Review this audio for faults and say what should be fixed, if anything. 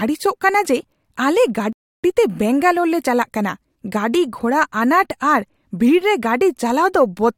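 A rebuffering stall runs from 1.73 to 2.04 s, right after "ᱠᱟᱱᱟ ᱡᱮ ᱟᱞᱮ". The speech drops abruptly to silence, then picks up cleanly with "ᱵᱮᱝᱜᱟᱞᱳᱨ ᱞᱮ" at exactly the point where it broke off. The player drained its store of downloaded audio and had to wait for fresh data before it could continue, so nothing is skipped, but about 310 ms of dead air is inserted into the flow. To prevent it, keep a deeper playback buffer and use adaptive bitrate switching so the stream steps down in quality instead of running dry.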